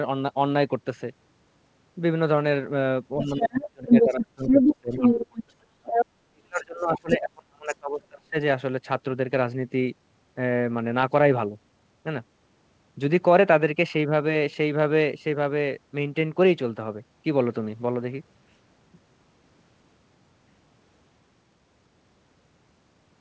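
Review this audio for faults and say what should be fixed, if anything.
From 3.18 to 5.7 s and again from 6.3 to 8.37 s, the talker's speech sinks and breaks up, with drops of roughly 30 dB in the first stretch and about 35 dB in the second, affecting around two seconds of each. This is speech suppressed in double talk. With both sides talking at once, the echo canceller likely could not separate the local talker from the loudspeaker echo and turned everything down together.

A second voice comes through the microphone at 3.28 to 5.43 s, about 5 dB louder than the talker. It returns at 5.84 to 6.06 s at roughly equal level, then in fainter scraps at 6.57 to 6.61 s, 6.95 to 7.16 s (about 5 dB below) and 7.67 to 7.75 s (about 20 dB below). This is the other side's voice leaking through. The far-end audio played on the talker's loudspeaker was likely not fully removed from the microphone, so residual echo survives under and between the suppression. 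Over the whole clip the audio stops at 8 kHz, which fits the G.722 call path at 64 kbps.

Better loudspeaker-to-microphone isolation, such as a headset or lower playback volume, plus an echo canceller with stronger double-talk handling and adaptive residual suppression, would prevent both faults.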